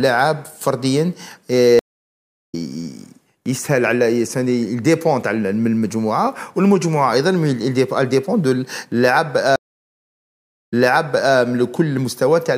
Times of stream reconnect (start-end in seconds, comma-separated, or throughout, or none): 1.79-2.55, 9.56-11.35